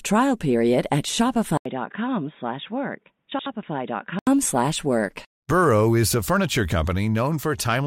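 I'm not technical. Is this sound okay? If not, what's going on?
No. At about 1.57 seconds, just after "trial period at", the recording likely switched to a poorer microphone, an input switched to a poorer device. There's a brief gap of about 80 ms at the switch. From then until about 4.27 seconds the speech sounds dull and boxy, because nothing above 3.8 kHz gets through. It's also noticeably quieter, with a faint new background noise, until the clearer sound returns.

Inside that stretch, from about 3.32 to 3.46 seconds, there are frames out of order. Two neighbouring chunks of audio, each 72 ms long, were delivered in the wrong order and played back swapped, which fits runs of three frames each. You hear a short garbled flutter. Nothing is missing; it's just shuffled.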